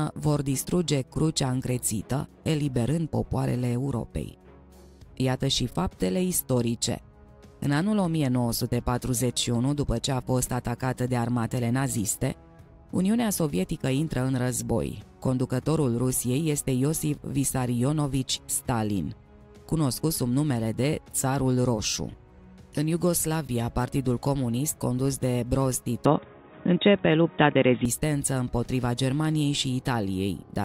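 Input switched to a poorer device, 26.05–27.85 s: the audio abruptly turns dull, losing everything above 3.8 kHz, with a small level shift and faint new noise, likely from a different microphone.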